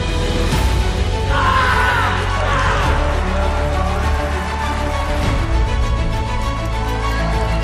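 Around 2.74 s the audio suddenly jumps forward, losing roughly a tenth of a second. That's compressed frames being skipped: the decoder never played a short run of frames, either because they were missing from the file or because it rejected them as damaged. The gap sounds like about four frames, which fits a frame length near 23 ms.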